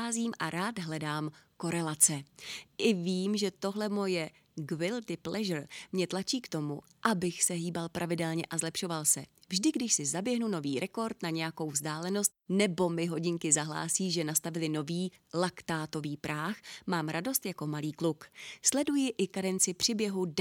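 No technical faults can be heard anywhere in the speech recording. Nothing in it calls for a timestamp or an explanation.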